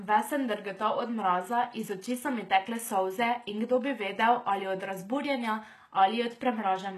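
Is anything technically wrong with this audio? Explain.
Yes. Throughout the speech, the treble sounds rebuilt rather than real, which points to HE-AAC compression at a low bitrate, around 16 kbps. The likely mechanism is spectral band replication, which copies lower bands upward. The result is gritty, lispy s sounds, and nothing is heard above about 12.3 kHz.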